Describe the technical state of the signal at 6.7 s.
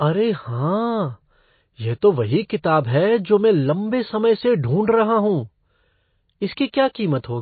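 At 6.72 s a short burst of hiss runs about 17 ms ahead of a sharp onset, blurring its attack so it sounds soft and smeared. This is pre-echo: the codec spreads quantisation noise across a whole transform block, so the noise sized for the loud attack also fills the quiet instant before it.

The sound around this moment is dull and watery, with nothing above 4.5 kHz and a swirling quality on sibilants. That points to MP3 compression as the likely cause, at a bitrate that fits roughly 24 kbps, where the encoder drops the treble and weak spectral lines flicker between frames.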